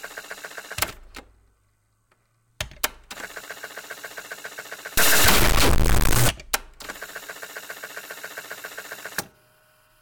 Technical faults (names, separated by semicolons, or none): stuck bit